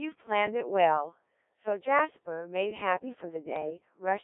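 Throughout, the speech has the robotic, buzzy sound of a Codec 2 vocoder, which fits about 1.3 kbit/s. Sine waves rebuild pitch and envelope, band-limited to 250 Hz–3.6 kHz. From 1.98 to 2.10 s, bit errors on digital voice radio corrupt roughly two frames. Flipped bits, around 2%, make pitch and tone lurch into a brief warble.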